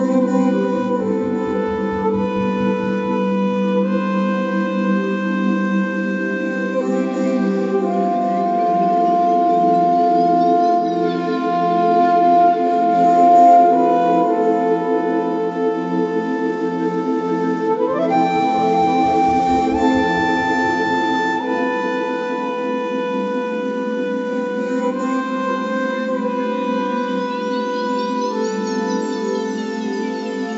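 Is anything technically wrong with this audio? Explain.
No, nothing is technically wrong with this audio.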